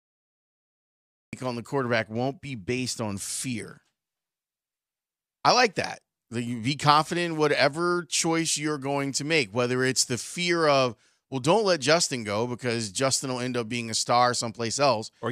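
The recording or stream was not yet capturing when the talker began, so the clip has a cut-off start. The first 1.33 s are digital silence, and at 1.33 s the speech switches on partway through a sound rather than building from its natural onset. There is no attack or fade-in, so the first syllable arrives abruptly with its beginning missing, as though the audio had been sliced open mid-utterance.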